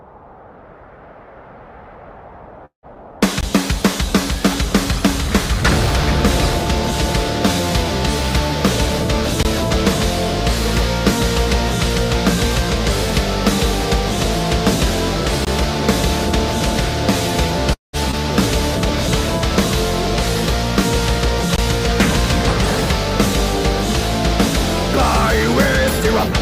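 Two call audio freezes show up, at 2.65 to 2.86 s and again at 17.73 to 17.96 s: the sound stalls for about 0.2 s, with the last bit smeared into a fading buzz that drops to silence before things pick up where they left off. That's likely packets held up in transit draining the jitter buffer. Right after each one there's a skip ahead, at 2.95 s and 18.11 s, where roughly a tenth of a second just vanishes and the two sides butt together with barely a seam, as if the receiver dumped backed-up audio to catch up on delay. Then there's a gap between chunks, a 20 ms hole at 3.41, 9.43, 15.45 and 21.56 s, landing every 6 s like clockwork. Nothing's lost there, it's just silence wedged between 6-second chunks at each join.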